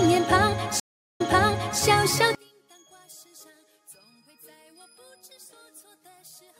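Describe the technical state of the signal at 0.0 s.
The signal at 0.0 s is intact, with no audible technical fault at that moment.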